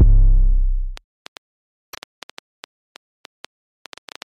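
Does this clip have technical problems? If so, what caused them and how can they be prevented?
Yes. A train of clicks runs from 0.97 to 4.23 s: about twenty similar pulses at roughly 6.3 per second, irregularly spaced and peaking about level with the signal. Interference from nearby equipment or a faulty connection or power supply is the likely cause. Unlike a single dropout, the clicks repeat with the same shape across the whole span. Shielding cables and replacing the interface would prevent it.

Damaged data in a compressed stream shows up from 1.84 to 1.95 s as a brief garbled blip, where the decoder misreads corrupted frames and resyncs. It is one short burst rather than a series of identical pulses. Verifying transfers with checksums and using error-tolerant streaming would prevent it.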